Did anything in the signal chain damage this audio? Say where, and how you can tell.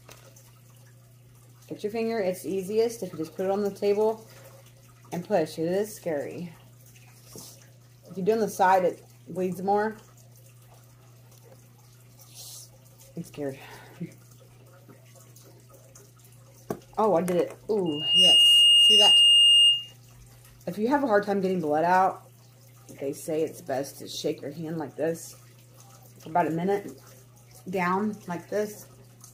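Yes. Loudspeaker feedback squeal in the analogue mic-to-speaker loop: from 17.86 to 19.94 s, a 2.8 kHz tone swells to about 10 dB above the audio, self-building unlike a steady whine.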